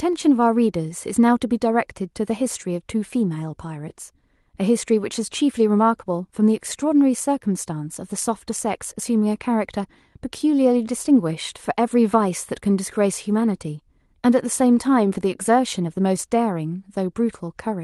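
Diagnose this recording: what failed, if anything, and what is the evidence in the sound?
Nothing failed; the speech survives the call path intact.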